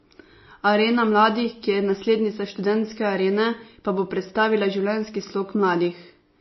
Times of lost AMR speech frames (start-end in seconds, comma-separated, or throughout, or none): none